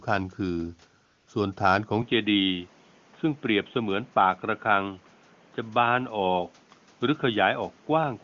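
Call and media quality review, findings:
AMR comfort noise, 1.05 to 1.27 s: real background replaced by smooth synthetic hiss for 220 ms; sender's voice activity detection halted speech frames, receiver filled the gap.

Dull, band-limited sound from 2.02 s to end, nothing above 3.8 kHz, no gap at the change, level about the same, new noise floor roughly 35 dB down; likely input switched to a poorer device.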